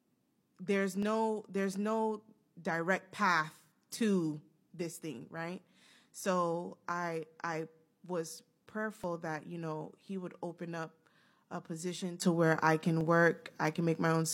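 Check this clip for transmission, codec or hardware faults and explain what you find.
Two kinds of fault are present in the speech: a repeating overlap between stream segments, and a sudden gain jump near the end.

Overlap between stream segments occurs four times, at 1.03 s, 5.01 s, 9.04 s and 13.01 s, removing about 40 ms, 30 ms, 25 ms and 40 ms of audio respectively. The 4-second spacing fits segments whose time stamps overlap at each boundary. The player discards the overlapping span even though that sound was not actually duplicated, so the waveform jumps ahead and each boundary produces a click or tiny skip.

A sudden gain jump occurs at 12.22 s. Level rises by about 11 dB in a single step and stays there until the end. Speech and background noise rise together, which points to a digital gain change rather than anything at the source. The likely cause is a gain setting or bit shift applied instantly instead of being ramped in. 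The result is an abrupt step up in loudness.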